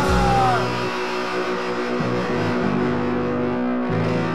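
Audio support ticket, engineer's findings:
No audible faults found on review.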